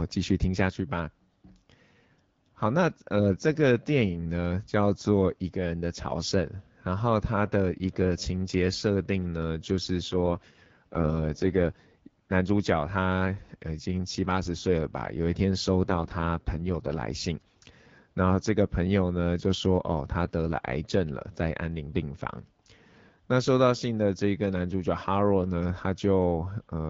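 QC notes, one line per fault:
10.12 to 11.74 s and 15.84 to 16.98 s, AMR rate drop: In both spans the speech turns rough, raspy and more synthetic, then clears again. The band stays as wide and nothing drops out. This fits the wideband coder stepping down from 12.65 to 6.6 kbit/s and spending the freed bits on error protection. At that low rate the vocal tract model has too few bits to follow the voice closely. Outside these spans the HD Voice coding sounds clear.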